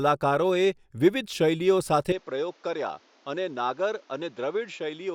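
Input switched to a poorer device at 2.12 s: speech abruptly dulls, nothing above 7.3 kHz, about 10 dB quieter with faint new noise, likely another microphone.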